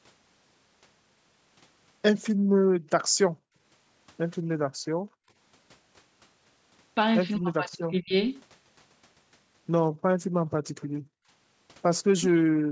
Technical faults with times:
2.21-2.27 echo leak
2.35-5.36 background gated by the echo canceller
7.37-8.13 speech suppressed in double talk
7.71-7.78 echo leak
9.91-12.71 background gated by the echo canceller
10.81-10.87 echo leak
12.19-12.25 speech suppressed in double talk

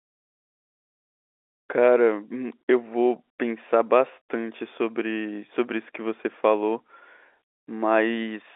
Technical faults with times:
none

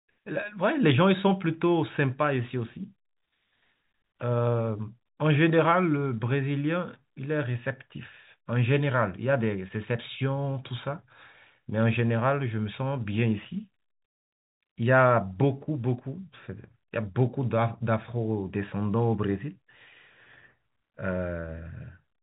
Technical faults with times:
none

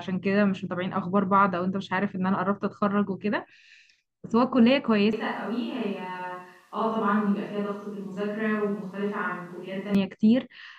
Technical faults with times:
5.13-9.95 switch to a distant microphone

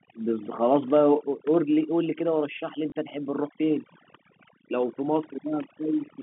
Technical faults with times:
0.00-6.23 overdone noise removal
2.90-2.92 packet loss with last packet repeated

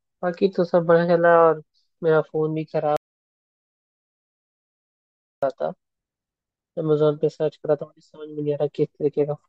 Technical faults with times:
2.97-5.42 audio dropout to silence

